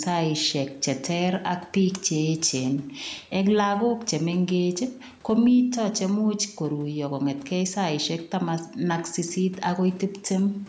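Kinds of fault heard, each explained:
Gain pumping: the level ducks a few decibels under loud speech, bringing loud and soft parts closer together, likely excessive input gain with a fast limiter pulling it down.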